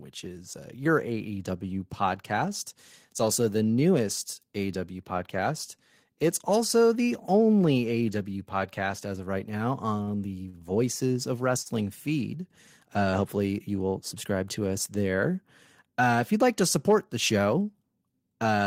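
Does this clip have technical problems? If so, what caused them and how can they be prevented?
Yes. The speech has three short stalls from a late packet, at 10.03–10.10 s, 10.49–10.57 s and 11.62–11.68 s. Each time the jitter buffer ran dry, so the receiver stretched the last sound for 39, 44 and 38 ms, then resumed from the same point. Unlike a lost packet, nothing is skipped; a sound is simply held too long, and the delay grows by the stretched amount. A deeper or better-adapted jitter buffer, plus steadier network delivery, prevents these stalls.

A jitter buffer speed-up runs from 13.84 to 14.41 s, where the speech plays at 107% speed with its pitch unchanged. The buffer held more audio than its target. To cut that delay, the receiver repeatedly removed short slices one or a few pitch periods long, about 50 ms in total, and the passage sounds hurried. A pitch or sample-rate error would also shift the pitch. 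Spreading the catch-up over a longer span, or avoiding the delay build-up, prevents it.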